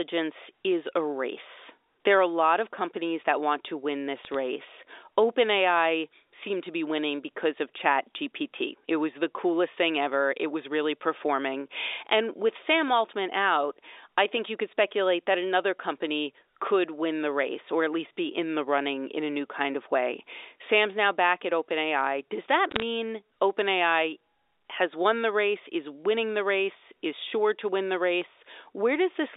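Bit errors on the digital phone line at 4.25–4.34 s, 10.02–10.06 s and 22.71–22.82 s: flipped bits corrupt single samples, giving sharp ticks over the speech. The last burst is the densest.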